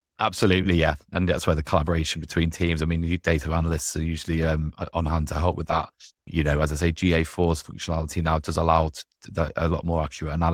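At 3.69–3.75 s, 5.71–5.77 s and 9.51–9.53 s, lost packets were rebuilt from error correction: low-bitrate copies in following packets filled each gap, so the speech briefly turns rough and noisy without a dropout, with a continuous waveform and blurred, hazier spectrogram detail there.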